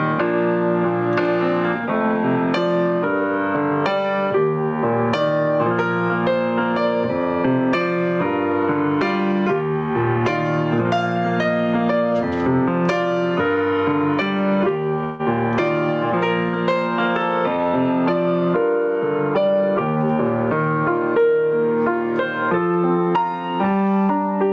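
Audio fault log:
throughout: gain pumping. Background swells in gaps and ducks by about 15 dB under loud sounds, likely from excessive input gain driving a fast limiter.
15.04–15.21 s: call audio freeze. A 0.15 s fading fill interrupts the sound, likely jitter buffer starvation; playback resumes where it stopped, nothing lost.
19.40–20.11 s: jitter buffer speed-up. Sound runs at 113% speed, same pitch, as repeated pitch-period cuts trim about a tenth of a second of excess delay.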